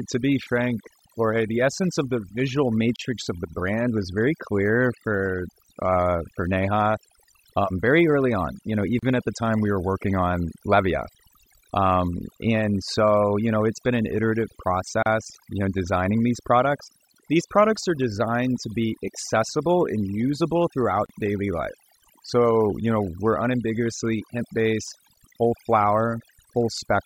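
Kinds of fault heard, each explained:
Overdone noise removal: Throughout this speech, the background drops and breaks up into twinkling specks. Noise reduction set too aggressively is switching off individual frequency bands near its noise estimate, taking quieter parts of the voice with them.
Gap at a join of encoded pieces: Brief dropouts of about 32 to 34 ms cut into the continuous sound at 2.96, 8.99, 15.03 and 21.06 s, once every 6 s. Each has smeared edges before the sound resumes where it stopped. Separately encoded segments were joined untrimmed, keeping each one's start delay and end padding.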